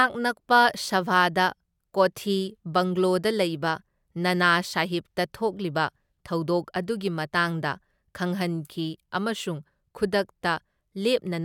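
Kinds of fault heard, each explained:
No kinds of fault are heard in this speech.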